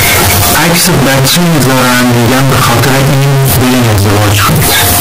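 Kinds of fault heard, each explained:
float read as integer: The whole clip is a harsh, near-square slab sitting at an almost fixed, high level, with background noise as loud as the speech, though the pitch is still traceable. Likely 32-bit float samples read as 32-bit integers, so sign and exponent bits set each value.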